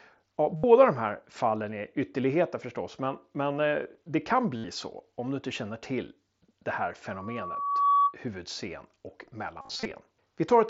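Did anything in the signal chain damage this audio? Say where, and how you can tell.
Yes. Concealed Bluetooth headset packet loss damages the wireless link at 0.56–0.64 s before "de här fallen", at 4.56–4.64 s between "men eh det kan" and "så om du inte", and in a scattered stretch at 9.61–9.91 s. The receiver fills gaps by repeating recent waveform. On a spectrogram these look like flat, buzzy harmonic smears. The first two gaps are 75 ms each. The last loses 180 ms across 300 ms, with runs up to 37.5 ms.

Loudspeaker feedback squeal enters acoustically at 7.11–8.15 s, starting after "känner till det här" and ending before "huvudscen och". A microphone picks up its own loudspeaker, and the loop gain exceeds one at 1.1 kHz, so that tone builds over roughly 0.7 s to about 5 dB above the speech. On a spectrogram it shows as a single bright horizontal line. The mSBC codec's 8 kHz ceiling appears throughout.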